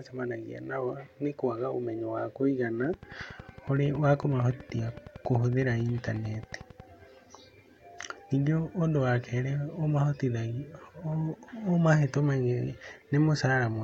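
From 2.84 to 6.81 s, right after "kwaga ũmenyo wa kũigana", a train of clicks ticks steadily at 10.9 per second, some forty near-identical pulses peaking about level with the speech. This is likely interference or a faulty connection or power supply. They show as evenly spaced vertical lines on a spectrogram and sharp spikes on the waveform.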